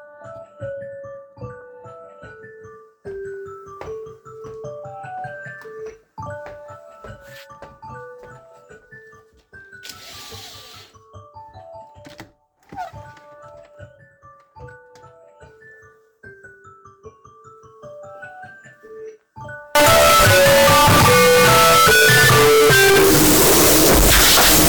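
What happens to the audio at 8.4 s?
Nothing goes wrong at 8.4 s; the sound carries on intact through that moment with no dropout, click or other fault.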